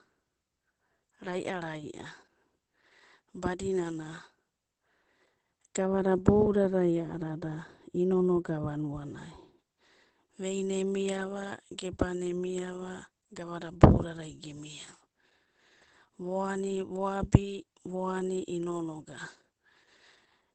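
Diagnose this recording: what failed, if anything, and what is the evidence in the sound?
The codec stage has failed: this speech carries Opus voice compression at plainly audible strength throughout. Everything above about 8.6 kHz is missing, so a spectrogram shows a hard ceiling across the whole clip, and the voice sounds muffled, hoarse and faintly robotic. That points to the SILK linear-prediction coder running in wideband mode at a low rate, which fits roughly 12 kbps, where the excitation is coded so coarsely that the harmonic detail smears.

Between 5.78 and 9.59 s a second fault appears: de-emphasis applied wrongly. A treble-cutting filter meant to undo pre-emphasis has run on audio that never had any, or has run twice, probably in a processing stage after capture. The highs roll off smoothly, reaching about 11 dB down at 10 kHz relative to 1 kHz, so this stretch sounds dull. On a spectrogram the upper bands fade gradually for those four seconds instead of stopping at a sharp edge.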